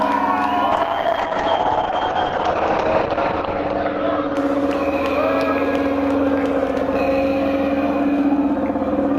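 From 0.72 s to 5.65 s the audio turns rough and watery and loses its top end, sounding muffled for about 2.6 s at its worst before clearing. This is a call bitrate drop: the encoder was starved of bits, consistent with a fall from about 64 to 8 kbps, so it coded coarsely and narrowed the bandwidth from 20 kHz to 8 kHz.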